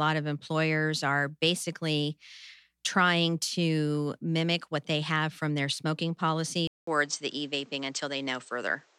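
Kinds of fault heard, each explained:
Input switched to a poorer device: at 6.67 s a 200 ms silence falls, then the speech carries nothing above 8.6 kHz, with a faint new background noise and unchanged loudness. The gap and fresh noise floor mark a likely device change, not simple filtering.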